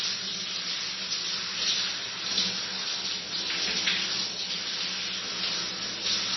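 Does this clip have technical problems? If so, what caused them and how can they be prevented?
Yes: throughout, the sound is watery and swirly, most likely from heavy MP3 compression fitting a low bitrate near 24 kbps, with the treble cut at 5.9 kHz. A spectrogram shows a flat ceiling there and flickering gaps below it. Prevent this by encoding at a higher bitrate or storing the audio in a lossless format.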